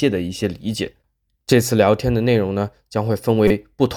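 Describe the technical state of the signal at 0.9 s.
At 0.9 s the speech signal is intact, with no audible technical fault at that moment.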